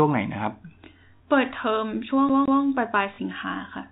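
At 1.16 s the speech, carried in a telephone band that stops at 4 kHz, breaks into a brief robotic stutter lasting 40 ms. This is packet loss with the last packet repeated. Two 20 ms packets went missing, and the receiver replayed the previous one to fill the gap.

From 2.29 to 2.62 s the sound behaves like a CD stuck on one turn. A segment of about 167 ms plays again twice, as if the laser jumped back each time. A short mute marks each jump, giving the fast, even stutter of a skipping disc.

At 3.14 s the same packet-loss fault returns. Again 40 ms is missing, which fits two lost packets. The repeated audio stands in for them and produces the same brief robotic stutter.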